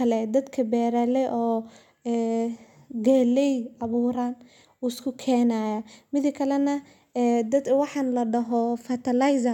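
Nothing in this recording stands out as a technical fault, so there's no problem to point to at any moment.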